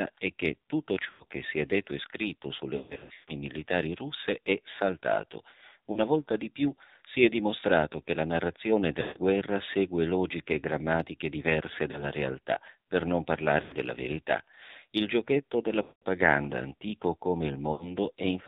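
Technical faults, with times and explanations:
Throughout, AMR narrowband mobile codec: nothing above 4 kHz gets through, and the voice comes out buzzy and synthetic, which fits a low mode around 7.4 kbps.
1.10 to 1.24 s (after "è che tutto", before "che si è detto"), 2.76 to 3.33 s (after "detto e scritto sulle", before "militari russe è saltato"), 5.92 to 6.01 s, 9.02 to 9.19 s, 11.92 to 12.05 s, 13.62 to 13.75 s, 15.82 to 16.04 s, and 17.72 to 17.91 s (after "antico come"), lost AMR speech frames: the decoder fills the gaps by stretching the last good sound and letting it fade. Short gaps come across as dips or warbles, and the voice returns rough. The gap at 15.82 s runs about 200 ms and fades out. The one at 2.76 s is a choppy cluster over about half a second.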